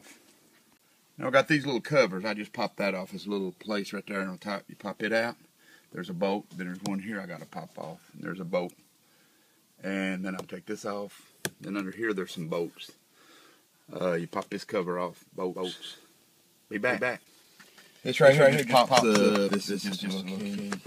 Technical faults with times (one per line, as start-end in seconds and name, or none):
15.55-20.87 doubled audio track